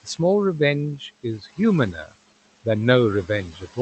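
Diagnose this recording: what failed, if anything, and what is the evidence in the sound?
Call processing is the culprit: noise suppressor artifacts run throughout, with room noise dipping about 17 dB in the gaps and swelling under the speech.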